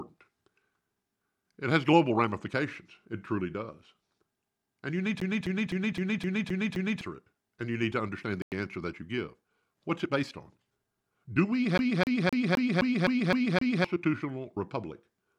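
It's a speech clip with two kinds of trouble. Right after "you need", from 5.20 to 7.01 s, the same 0.26 s slice repeats seven times with a little mute at each jump before it moves on to "it and you need". That's the CD stuck on one turn: a scratch keeps knocking the laser back a track at the same spot every revolution, hence the quick, perfectly regular stutter. The same thing happens again from 11.78 to 13.84 s, with the same 0.26 s loop, eight times over. Separately, after "you need to understand" the sound drops to silence from 8.42 to 8.52 s, about 98 ms, then picks up at "answer that you give". That reads as a Bluetooth stall, likely interference holding packets up long enough for the headphones' buffer to run dry until the resent audio arrived.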